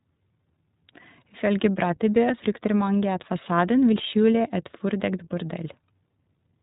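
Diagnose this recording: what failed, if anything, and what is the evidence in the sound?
What failed is the codec stage: the speech went through iLBC. Nothing comes through above 4 kHz for the whole clip, and there's a plainly audible rough, synthetic edge because each 20 ms frame's excitation is coded independently, which fits iLBC's 15.2 kbps mode.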